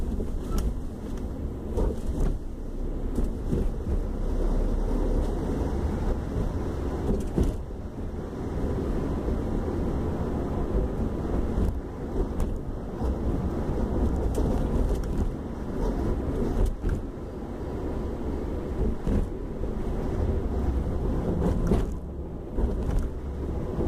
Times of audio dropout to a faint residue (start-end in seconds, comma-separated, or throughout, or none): none